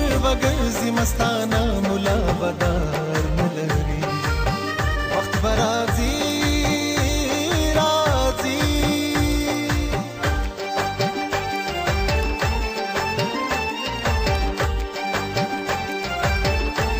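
From 0.15 s to 16.93 s, word clock ticks recur every 0.1 s or so. An unlocked receiver clock drifts roughly 200 ppm, slipping single samples.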